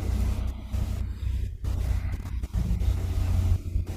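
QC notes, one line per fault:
No faults found in this speech clip. There is nothing to log at any point in it.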